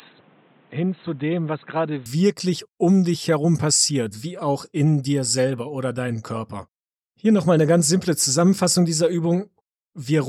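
From the start to 2.06 s, the sound is band-limited. Nothing reaches above 4 kHz, so it comes across dull and boxy. It also sits a few decibels quieter, and a faint background noise rides underneath, well below the signal. At 2.06 s the full band returns at once, with no gap. The likely cause is an input switched to a poorer device, such as a headset's call profile, before the system moved back to the better one.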